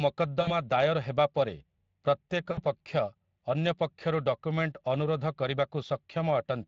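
Throughout, the speech carries Speex codec damage: a hoarse, noisy roughness from a starved excitation, with a noise-like high band, which fits a Speex mode near 20 kbps.

At 0.41 to 0.53 s and 2.51 to 2.60 s, VoIP packet loss concealed by the speech codec stretches the sound out and lets it fade, not the clean gap of a plain dropout.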